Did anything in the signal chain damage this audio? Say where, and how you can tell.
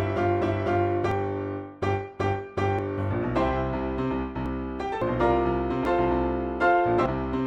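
Yes, at the driver or buffer stage. Abrupt jumps ahead in the sound come at 1.12, 2.79, 4.46, 5.02, 5.85 and 7.06 s. Each skip loses roughly a tenth of a second, with about two tenths at 4.46 s and about three tenths at 7.06 s. The likely cause is a dropped buffer (overrun): the capture software fell behind, the hardware overwrote unread blocks, and the remaining audio was spliced together with no gap. On a waveform each splice is a sudden discontinuity. On a spectrogram it is a thin vertical broadband line where the spectral content changes abruptly.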